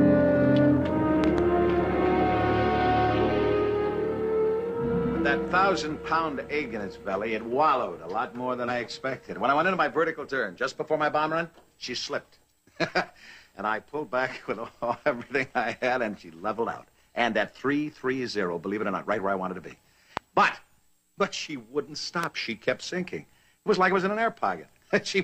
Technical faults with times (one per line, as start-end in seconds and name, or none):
1.24-1.40 loud pop
8.64-8.69 damaged data in a compressed stream
20.17-20.19 loud pop
22.24-22.26 loud pop